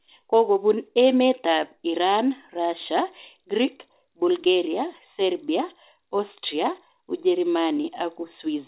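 Short concealed packet loss occurs at 4.44 to 4.48 s and again at 7.82 to 7.86 s. Each time, about 20 ms of audio arrived too late to decode. The receiver stretched the preceding sound across the gap and blended back, leaving a brief smeared wobble.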